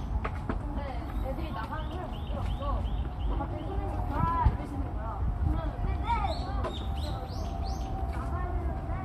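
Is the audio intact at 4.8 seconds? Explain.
Yes, at 4.8 seconds the audio is intact, with no fault present at that moment.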